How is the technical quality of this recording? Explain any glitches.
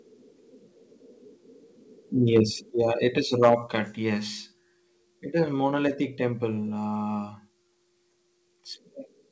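The recording has clear technical faults: two bursts of distortion on loud peaks and a sudden drop in level between them. Nothing sits above 8 kHz, which fits a wideband call codec such as G.722.

Microphone overload at 2.36 to 2.40 s and again at 3.42 to 3.54 s. The input was likely driven past the converter's ceiling, by about 2 dB in the first burst and about 7 dB in the second, so the wave crests are sliced off flat. Roughly a tenth of the samples are flattened in the first burst and a smaller share in the longer second one. This gives a harsh, crackly edge. On a waveform the peaks appear as squared-off plateaus. On a spectrogram the bursts show as brief vertical smears of added harmonics.

Microphone volume stepped down at 2.7 s. Shortly after the first overload, the input gain drops in one step by 4 dB, likely an automatic correction by the call software reacting to the clipping. The sound and its background both become quieter at once rather than fading. 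On a waveform the envelope shows a clean downward step. On a spectrogram the whole band dims evenly from that instant. The later, heavier clipping at 3.42 s shows that the reduction was not enough.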